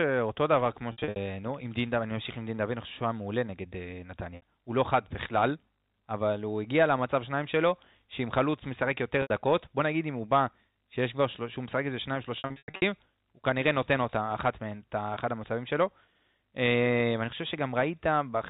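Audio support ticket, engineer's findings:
Packet loss with pitch repetition on the network path; the concealment loops the last pitch period, fading over about 50 ms. Heard at 0.92–1.16 s (180 ms lost across 240 ms), 4.36–4.42 s (60 ms), 9.22–9.30 s (80 ms) and 12.38–12.82 s (340 ms across 440 ms, longest run 100 ms). Short gaps give a held, buzzy tone; longer runs fade toward silence, then cross-fade back, all within the 4 kHz G.711 telephone band.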